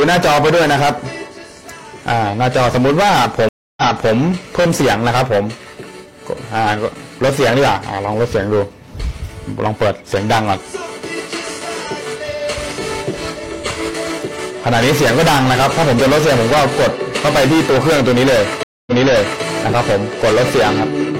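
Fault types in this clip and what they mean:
stream reconnect: the connection dropped, playback went silent, and a fresh decoder restarted mid-stream from a resent burst. At 3.49 s a 284 ms gap is followed by audio resuming 372 ms earlier; at 18.63 s, 237 ms of silence, then 557 ms repeated.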